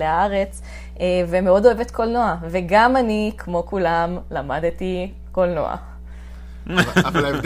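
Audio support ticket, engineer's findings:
Mains hum under the speech for the whole clip. Steady 60 Hz tone, roughly 15 dB below signal. Probably a ground loop or nearby transformer bleeding power-line current into the chain.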